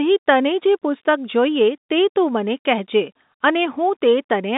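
Speech carried over G.711 telephone coding, confined to the line band of about 200 Hz to 3.7 kHz with nothing above 3.8 kHz, and no technical faults to report.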